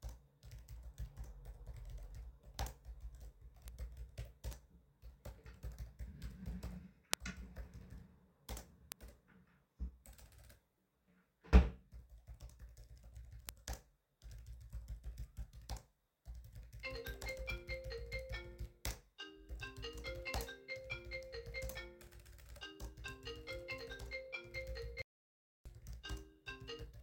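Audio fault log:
3.68, 4.53, 7.14, 8.92 and 13.49 s: bit error spike. Each is one sharp tick. A single flipped bit makes one sample jump by a power of two and snap back. At 7.14 s three samples in a row are hit. The click is broadband and unrelated to the sound.
25.02 to 25.66 s: audio dropout to silence. The sound cuts off abruptly, and about 0.64 s is lost. The gap is silent with no room tone. The likely cause is a lost input while the recorder kept writing silence.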